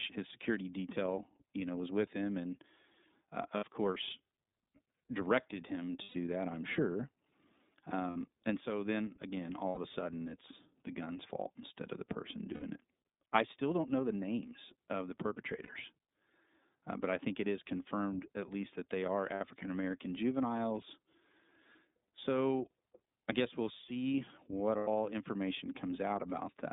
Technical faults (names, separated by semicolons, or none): iLBC codec; lost iLBC frames